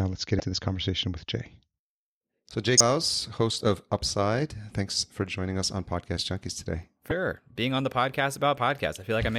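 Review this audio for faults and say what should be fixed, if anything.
Three short bursts of damaged data in the compressed stream occur in this speech, at 0.37–0.40 s (between "let's get" and "this conversation with"), 2.77–2.81 s (just before "host of") and 7.08–7.11 s. Each lasts about 30 ms and sounds like a brief chirp or blip. Corrupted bytes make the decoder misread or reject those frames, lose sync, and resume at the next valid frame header. Prevent it by verifying file or stream integrity with checksums and re-sourcing or re-transferring the encoded data rather than patching the decoded output.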